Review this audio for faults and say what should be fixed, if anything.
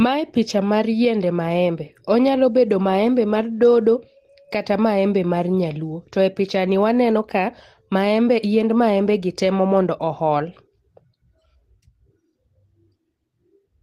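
Nothing to fix: no faults found in the speech recording, so no corrective action is required.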